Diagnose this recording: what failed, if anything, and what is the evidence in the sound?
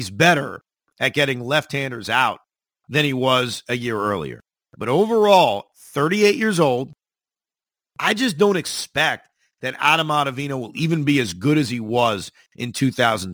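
Crude rate conversion at the sample-format conversion stage is audible for the whole clip. A gritty, inharmonic fizz rides on the speech, strongest on loud and sibilant passages, sitting roughly 25 dB below the voice. Its pattern fits a 48 kHz to 44.1 kHz conversion done by nearest-sample picking: samples are dropped on a fixed cycle with no anti-alias filter, so the timing error folds into shifted, inharmonic copies of the speech.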